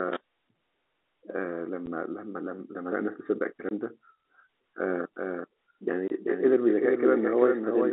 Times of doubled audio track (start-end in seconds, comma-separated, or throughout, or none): 5.16-7.92